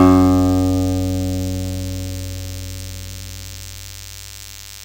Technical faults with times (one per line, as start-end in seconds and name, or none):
0.00-4.84 DECT cordless phone buzz